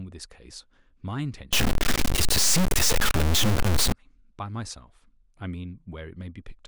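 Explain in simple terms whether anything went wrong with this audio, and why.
Something likely went wrong in the converter or the line carrying the digital signal: one of the bits that make up each sample seems to have got stuck, a fault called a stuck bit. From 1.53 to 3.92 s about half the samples come out wrong by a fixed amount, so the speech turns harsh and buzzy. Because the stuck bit is a fairly significant one, even the quiet gaps between sounds fill with clearly audible noise.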